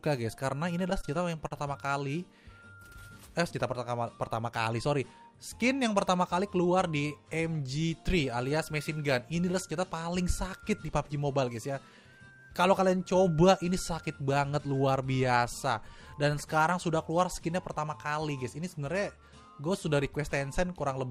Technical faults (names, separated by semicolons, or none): repeated stalls (stutter); jitter buffer speed-up